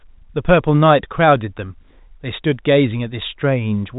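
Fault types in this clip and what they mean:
No faults are present; the speech sits in an ordinary telephone band with nothing above 3.8 kHz, as expected from G.711 A-law coding.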